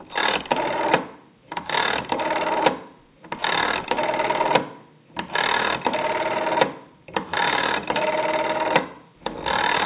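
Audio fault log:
No audible faults occur anywhere in this sound recording.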